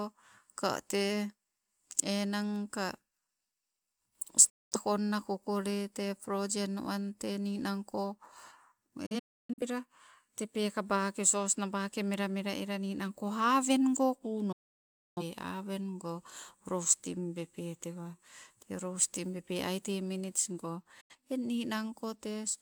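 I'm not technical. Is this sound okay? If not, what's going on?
No. The speech has four digital broadcast dropouts, where the receiver briefly lost the signal and muted: at 4.49 s, in a few short holes between 9.06 and 9.63 s, for about two-thirds of a second at 14.52 s, and briefly at 21.01 s. Those bits are gone.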